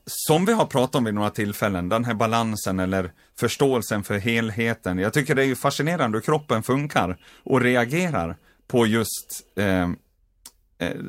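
Nothing goes wrong anywhere in this recording of speech, so there's no technical fault to describe.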